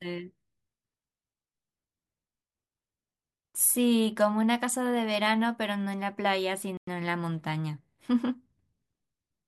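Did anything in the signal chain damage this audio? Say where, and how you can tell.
Yes. A Bluetooth stall, likely from radio interference delaying packets on the wireless link, let the headphone buffer run empty. The speech drops to silence for about 100 ms, from 6.77 to 6.88 s, then resumes.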